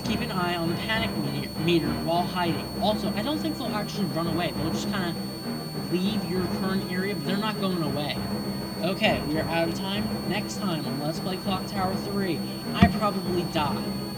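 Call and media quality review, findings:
High thin whistle, present throughout, pitch wandering between 4.39 and 4.47 kHz, roughly 15 dB under the programme. Switching supply whistle: a switch-mode power supply falling into audible burst-mode operation, its frequency shifting as load varies.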